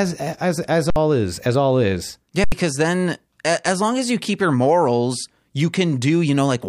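At 0.90 s the speech stops for 60 ms, and at 2.44 s for 80 ms. Each is an underrun with held sample. The buffer ran empty. The converter held its last value. Each time, about 70 ms of audio went missing.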